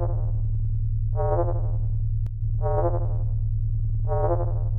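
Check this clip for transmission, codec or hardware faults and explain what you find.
One fault is present, from 2.27 to 2.42 s: the level drops abruptly by about 6 dB for roughly 0.15 s, then snaps back. The likely cause is one channel dropping out. After mono summing, content shared by both channels halves, and anything only in the missing channel vanishes. Unlike a full dropout, the sound never goes silent, and the steady 6 dB step with hard edges rules out a smooth gain dip.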